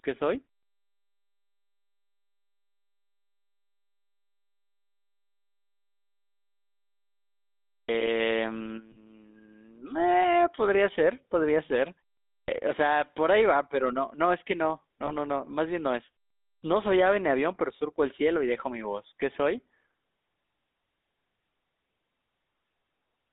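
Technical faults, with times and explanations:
Throughout: GSM full-rate codec. The sound has a buzzy, gravelly roughness and is confined to a narrow line band of 250 Hz to 3.7 kHz. A vocal-tract model driven by coarse, regularly spaced pulses causes this, which fits the 13 kbps full-rate coder. The damage is plainly audible.
7.78 s, 12.37 s, 16.52 s: clipped start after a pause. About 110 ms is swallowed each time, so the sound begins abruptly without its onset. The output device sleeps during silence, 7.4 s before the first event and 0.4 s before the others, and needs time to wake.
8.92–8.97 s, 15.06–15.12 s: lost GSM frames. The sound briefly freezes into a rough, metallic ring as the decoder repeats the last good frame's settings. The first gap lasts about 40 ms, which fits two 20 ms frames, and the second about 20 ms, one frame.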